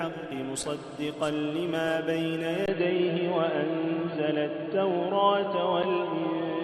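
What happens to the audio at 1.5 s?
Nothing goes wrong at 1.5 s; the audio is intact at that moment, with no fault to be heard there.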